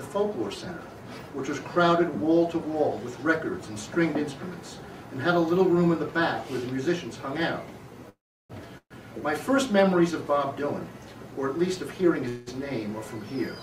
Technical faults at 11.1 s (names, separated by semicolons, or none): none